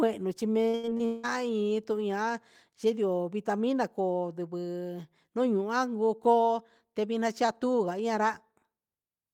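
Repeated packet loss (robotic sound) runs from 0.69 to 1.25 s, just after "chi na". Audio kept dropping out, each hole patched by extending the preceding sound, the longest about 180 ms. With about 60% of that stretch filled in, the speech turns choppy, with pieces missing.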